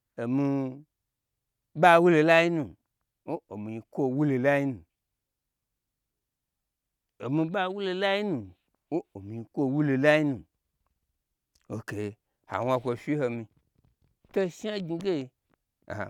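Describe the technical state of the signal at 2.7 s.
At 2.7 s the speech signal is intact, with no fault audible at that moment.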